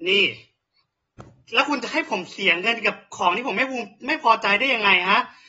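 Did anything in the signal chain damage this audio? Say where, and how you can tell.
Yes. The damage sits at the codec stage and runs through the whole speech clip: a hard ceiling at about 7.7 kHz leaves the voice dull, with a plainly audible fizzy smear on sibilants. This is most likely AAC compression, an AAC-LC encode at a low rate around 24 kbps, where the encoder discards high frequencies and coarsely quantises what remains. A spectrogram would show a flat-topped band stopping at 7.7 kHz.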